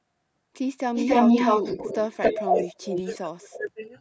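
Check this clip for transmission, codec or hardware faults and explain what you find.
Two faults turn up: a leaking echo that repeats the speech, and speech pushed down while both ends talk.

Echo leak at 0.94–2.68 s, 2.85–3.17 s and 3.95 s to the end: a copy trails the speech by 276 ms, first louder than the speech, then weaker, finally faint. The likely cause is a loudspeaker echo canceller letting the far end's sound back through. On a spectrogram, the same harmonic patterns repeat shifted about a quarter-second later.

Speech suppressed in double talk from 2.31 to 3.92 s: across roughly a second in total, the speech dips and breaks up, by up to around 30 dB. This is likely an echo canceller cutting both talkers when it cannot separate them. The waveform shows sudden deep notches in the envelope.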